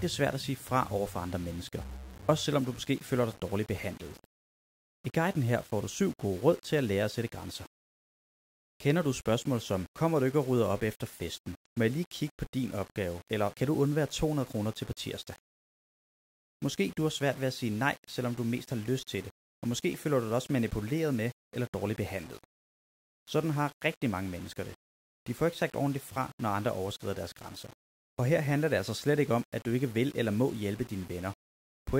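A speech recording with grainy, gritty distortion across the whole clip that tracks the signal, roughening quiet passages and sputtering on the softest decays, sitting roughly 25 dB below the speech. This is likely low bit depth without dither, consistent with rounding to about 7 bits.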